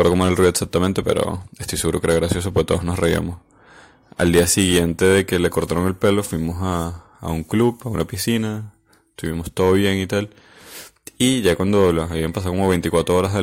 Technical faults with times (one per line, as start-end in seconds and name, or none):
0.00-13.42 hard clipping